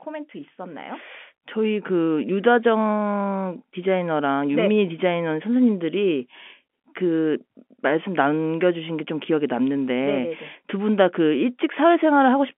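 Nothing stood out on listening to this speech clip.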